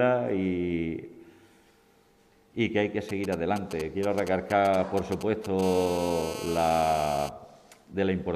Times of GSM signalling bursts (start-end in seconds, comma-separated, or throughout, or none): 3.09-5.61